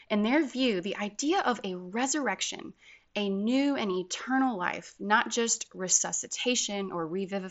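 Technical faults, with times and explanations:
No technical faults detected.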